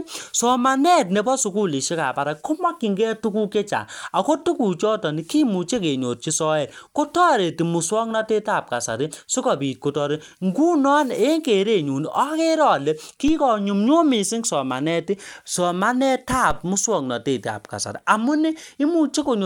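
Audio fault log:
13.28 s and 16.51 s, DC step: a low thump at each moment while the speech carries on untouched. The waveform's zero line jumps suddenly, like an offset input being switched in. The offset then dies away through a 5 Hz high-pass, so only the thump remains.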